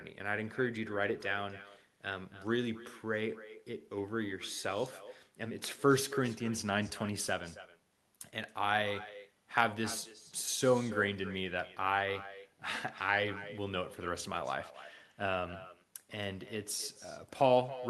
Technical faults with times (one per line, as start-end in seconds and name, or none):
0.00-17.90 echo with no canceller